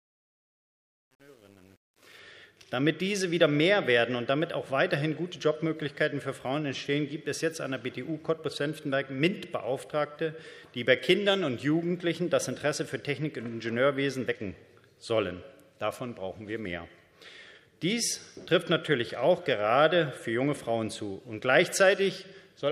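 Truncation distortion on a fade affects the fade-in from 0.0 to 2.19 s. A 9-bit undithered gain stage makes the quietest part, up to 1.97 s, sound gritty.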